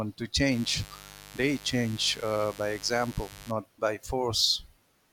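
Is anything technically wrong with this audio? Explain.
Yes. From 0.51 s to 3.52 s there is mains buzz. Something in the signal chain, such as a dimmer, a rectifier or an unshielded run of cable, lets sharp switching spikes from the 50 Hz supply into the audio twice per mains cycle. Those spikes carry a dense row of 50 Hz harmonics reaching up into the kilohertz range, so for those three seconds a steady, raspy buzz sits under the speech, roughly 20 dB below it.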